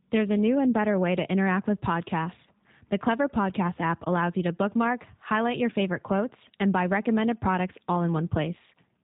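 From start to finish the speech carries G.729 codec damage, and it's plainly audible. Everything above 4 kHz is gone, and the voice comes out slightly rough and synthetic, rebuilt from a vocal tract filter and a handful of pulses. That's consistent with an 8 kbit/s G.729A stream.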